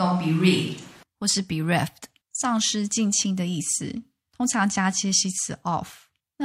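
Speech that is already roomy and hollow, with thin bass, from the start until 1.03 s, then abruptly turns close and full at a similar level. Room noise sits about 30 dB below the speech. The likely cause is a switch to a distant microphone.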